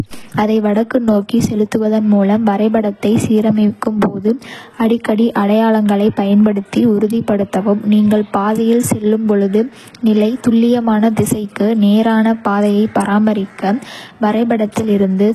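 A speech clip with HE-AAC compression damage throughout. Nothing reaches above 12.3 kHz. The treble sounds synthetic, and s sounds come out gritty and metallic. This is likely spectral band replication copying lower bands upward, and the heavy damage fits a very low bitrate near 16 kbps.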